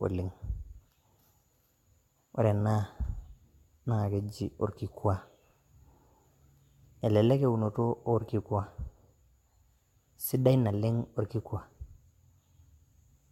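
From start to finish the speech carries generation loss: a swirly, hollow, smeared quality with softened consonant attacks and nothing above about 17 kHz. What separates it from a single low-bitrate encode is that the damage is heavier than that cutoff and bitrate would suggest, which fits an AAC-LC chain at 96 kbit/s. The likely cause is about four successive encodes, each requantising on a shifted frame grid so the noise and spectral holes pile up.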